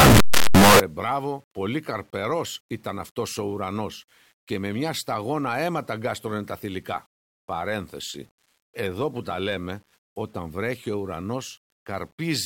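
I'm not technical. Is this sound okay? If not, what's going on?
No. Signed and unsigned mixed up, from the start to 0.8 s, just before "μπράβο πολύ καρπερός ήταν": a blast of loud, harsh distortion, even in the quiet parts. The likely cause is the 8-bit samples being read with the wrong sign convention, so every small swing flips to an extreme.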